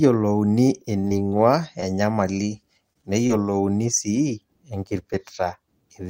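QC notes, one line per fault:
0.99–1.41 s, repeated packet loss (robotic sound): five gaps, the longest 41 ms, were patched by extending the preceding sound, so 111 ms of the stretch (27%) is synthetic and 60 ms of real audio is gone. This gives choppy speech with pieces missing. The spectrogram shows smeared, repeated harmonic blocks with hard seams.
1.81–1.84 s and 3.27–3.31 s, short concealed packet loss: about 20 ms went missing each time and was filled with 15 ms and 24 ms of continued sound, then crossfaded back. Each is heard as a quick smear or wobble. The spectrogram shows a brief frozen, blurred slice.
2.93–2.97 s, short stall from a late packet: a packet arrived about 25 ms late, the jitter buffer ran dry, and the last sound was stretched 25 ms before playback resumed where it stopped. Nothing is lost, but one sound lingers slightly with a faint buzz or dip. The spectrogram shows a horizontally elongated frame.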